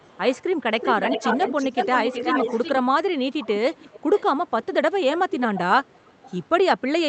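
Speech with an echo leak: a delayed copy of the voice, trailing by roughly 0.34 to 0.41 s, sounds at 0–0.43, 0.79–2.79, 3.31–4.24, 4.47–4.66, 5.06–5.38, 5.55–5.6 and 5.85–6.44 s. It is loudest around 0.79–2.79 s. The likely cause is a far-end loudspeaker whose echo canceller let some of the signal return.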